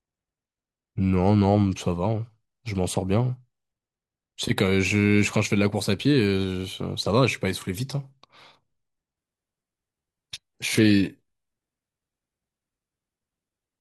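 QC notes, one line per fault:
9.17–13.80 s, adaptive stream at a lower bitrate: at 9.17 s the speech switches abruptly, with no gap, to a much poorer rendition that lasts to the end. The treble goes thin and synthetic and codec artefacts rise, because the player dropped to a lower-bitrate version of the stream when the connection slowed. The swirly, reconstructed top end fits a change from roughly 96 kbit/s AAC-LC to about 16 kbit/s HE-AAC.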